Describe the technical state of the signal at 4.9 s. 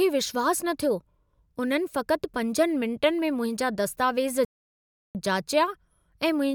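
At 4.9 s the speech has gone silent, midway through a 0.7 s playback stall from 4.45 to 5.15 s, likely the player running short of data before resuming.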